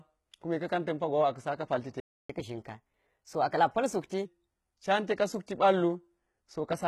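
Right through the speech there's heavy codec damage that sounds like HE-AAC compression, likely at around 16 kbps. The treble is rebuilt rather than real, so the s sounds come out gritty and lispy. At 2.00 s, just after "pal ti te", the sound drops out for about 0.29 s, likely a playback stall where the player briefly ran dry. From 2.30 s to 4.25 s it catches up at higher speed, running 1.15 times fast and roughly two semitones sharp before settling back just before "can teka".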